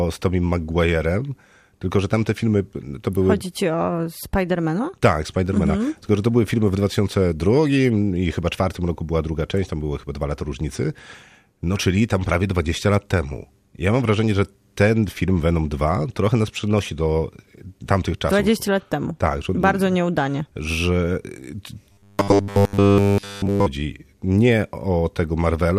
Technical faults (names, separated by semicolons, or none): robotic sound from repeated short buffers